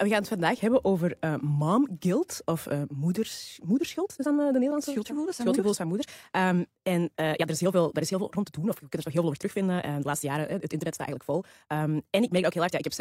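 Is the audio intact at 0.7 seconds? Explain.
Yes, at 0.7 s the speech plays through cleanly, with no dropout, click, distortion or other fault at that moment.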